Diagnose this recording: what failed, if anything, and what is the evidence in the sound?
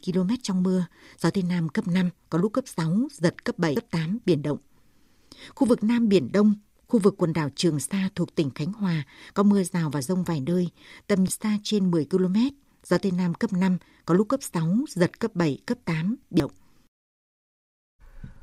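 Damaged data in a compressed stream at 3.76 s, 11.28 s and 16.40 s, a failure at the codec stage. Each event is a brief blip of only a few milliseconds cutting across the speech. Corrupted bytes in the encoded stream make the decoder misread those frames, lose sync and hunt for the next valid frame header, so the output momentarily carries garbage before normal decoding resumes.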